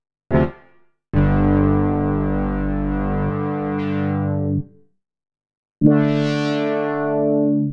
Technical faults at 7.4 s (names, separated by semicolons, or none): none